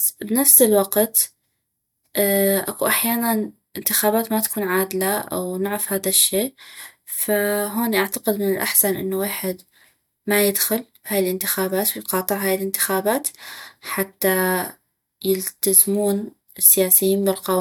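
No technical faults can be heard anywhere in the recording.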